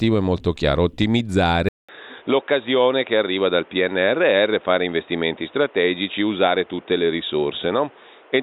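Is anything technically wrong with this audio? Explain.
Yes. At 1.69 s the recording likely switches to a poorer input device, with a 0.2 s silence at the switch. The new path passes nothing above 3.8 kHz, so the speech turns dull and boxy to the end, at similar level, with new background noise roughly 30 dB down.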